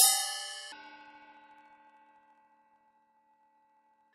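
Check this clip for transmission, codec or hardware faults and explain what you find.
One fault is present. From 0.72 s to the end, interleaved audio read as planar: 24 ms blocks split into half-speed left and right, dropping an octave with a 41.7 Hz chop, yet pacing stays correct, unlike a sample-rate mismatch.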